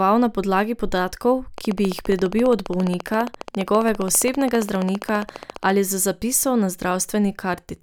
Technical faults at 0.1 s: none

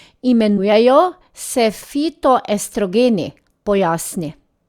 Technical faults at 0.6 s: compressed frames skipped

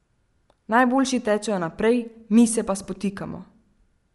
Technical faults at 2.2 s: Bluetooth LC3 compression

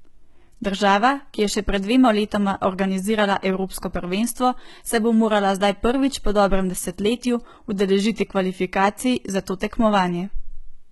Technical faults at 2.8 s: HE-AAC compression

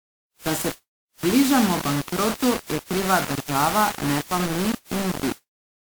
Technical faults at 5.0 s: low bit depth without dither; generation loss

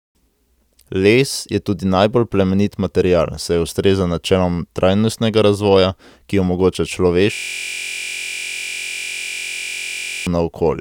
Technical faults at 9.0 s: system hang loop

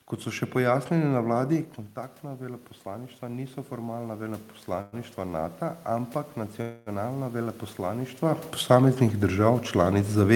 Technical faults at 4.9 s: automatic gain rising; call audio freeze

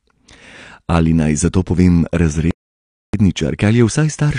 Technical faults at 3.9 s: AAC compression

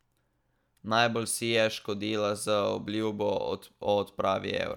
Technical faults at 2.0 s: none

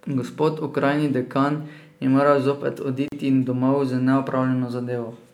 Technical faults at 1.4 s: none

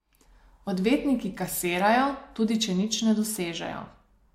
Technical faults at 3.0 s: none

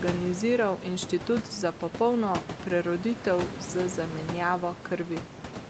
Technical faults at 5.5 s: none

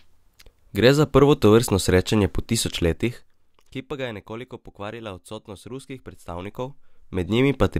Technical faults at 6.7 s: zipper noise

